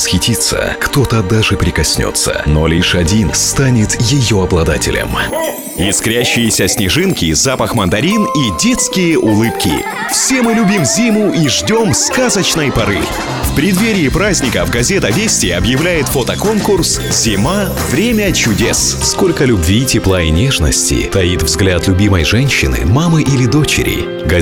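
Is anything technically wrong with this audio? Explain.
No, nothing technically wrong can be heard anywhere in this audio, and the signal holds steady and intact across its whole duration.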